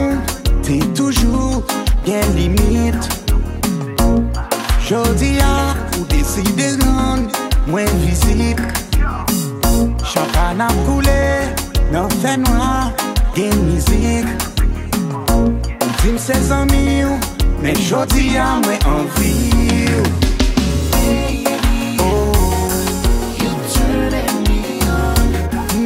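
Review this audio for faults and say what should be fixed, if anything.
I found no faults in this audio, so nothing needs to be fixed.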